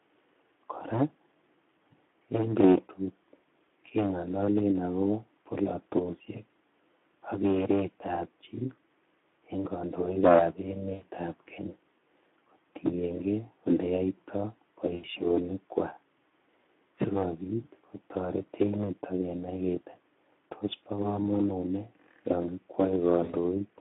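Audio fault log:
Throughout: Speex codec. Speech is confined to roughly 200 Hz to 3.5 kHz and sounds hoarse and noisy, which fits a low Speex setting near 11 kbps. A spectrogram shows nothing above 3.5 kHz and smeared, grainy harmonics below.
10.93–11.03 s (just after "en kondoikab"), 14.95–15.06 s, 23.24–23.35 s: VoIP packet loss concealed by the speech codec. About 80, 80 and 60 ms of audio went missing, and the decoder filled each gap by repeating its last pitch and filter with falling gain. Each gap becomes a short buzzy or noisy smear, which fits three or four lost frames. A spectrogram shows a frozen, repeated spectrum, and the waveform tapers before normal speech returns.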